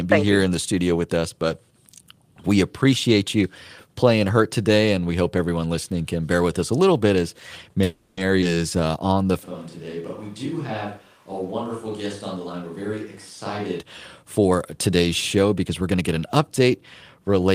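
Right after "a little bit as", at 7.83 s, there's what sounds like a call audio freeze running to 8.20 s. The likely cause is packets getting held up so the jitter buffer ran dry. The receiver fills the 340 ms by stretching the last sound into a fading buzz, then carries on where it left off, so nothing's lost, just a pause pushed in.

Then at 8.41 to 8.45 s you get a skip ahead: roughly a tenth of a second of audio gets dropped and the two sides are butted together almost directly, so it jumps forward.

From 8.80 to 9.33 s there's a jitter buffer slow-down. The buffer was rebuilding its reserve by repeating single pitch periods over and over, adding 90 ms. Playback runs at 85% speed with the pitch unchanged, so things sound drawn out.

At 9.45 s the sound suddenly goes roomy and hollow, with thinner bass, and it stays that way until 13.78 s. That's a switch to a distant microphone, likely because the close mic's signal dropped out. 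It comes in about 10 dB quieter, with room noise sitting roughly 30 dB below the speech.

There are two jitter buffer speed-ups, where the buffer was trimming excess delay by cutting out short pitch-period chunks. The first is inside that distant stretch, 12.37 to 13.12 s, at 113% speed with about 100 ms removed. The second runs from 14.23 to 16.13 s at 110%, shedding roughly 200 ms. Both sound hurried at the same pitch.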